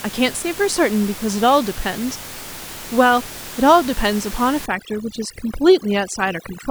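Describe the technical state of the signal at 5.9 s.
At 5.9 s you're inside a stretch of overdone noise removal running from 4.66 s to the end. The reducer is clamping bands it mistakes for the room noise, about 15 dB below the speech, so the background drops and breaks up into twinkling, warbling specks.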